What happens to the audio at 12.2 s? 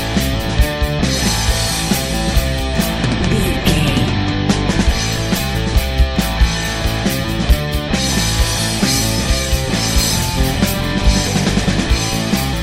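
Nothing goes wrong at 12.2 s; the audio plays through that moment intact.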